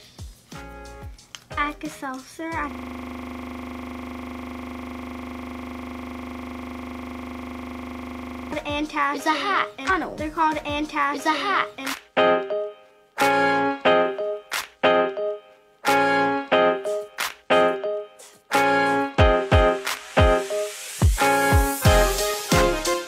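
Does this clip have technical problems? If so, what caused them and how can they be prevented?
Yes. From 2.71 to 8.52 s a steady 25 Hz buzz replaces the audio. This is a system hang loop: the system froze while the hardware kept replaying one 40 ms ring buffer about 145 times. Keeping the audio thread responsive and having the driver mute on underrun prevents it.

From 9.85 to 11.85 s, about 2 s of audio plays again after a small blip. This is a stream segment repeated, where the player queued the same segment twice. Checking segment sequence numbers before queuing prevents it.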